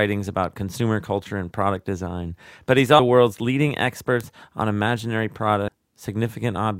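At 2.86 s, just after "and product design but", a bit error spike gives one sharp tick. A single sample jumps by a power of two and snaps straight back, so the waveform shows one isolated needle and the spectrogram shows a hairline vertical stripe running through every frequency, unrelated to the speech around it. The same fault returns at 4.21 s, between "world's leading" and "on imaginary", with the same needle and the same full-band line.

At 2.99 s, just before "world's leading", compressed frames are skipped. The decoder drops a run of frames, and the speech lurches forward by about half a second. That fits roughly fifteen frames of 32 ms each. The spectrogram shows the harmonic pattern breaking off and resuming mid-contour, and the waveform envelope changes abruptly. At 5.68 s the same thing happens again, this time cutting out about 300 ms, around ten frames.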